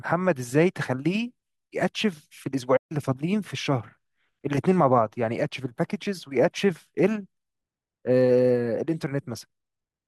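A speech clip with a playback stall: from 2.76 s to 2.92 s the sound cuts out mid-flow for about 136 ms, likely because the player ran out of buffered data or its thread was blocked. The waveform shows a flat line, and the spectrogram shows an empty vertical band across all frequencies.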